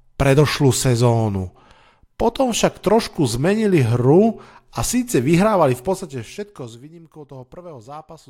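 From 5.60 to 6.86 s, zipper noise rides on the speech while the level falls by roughly 20 dB. The gain jumps in unsmoothed steps, about 300 per second, each leaving a tiny click that adds up to a buzzy ticking. The waveform envelope looks staircased, and the spectrogram shows vertical striations.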